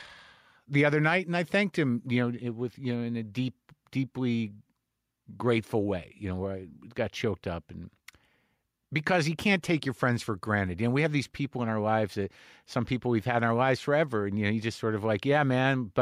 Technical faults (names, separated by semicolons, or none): none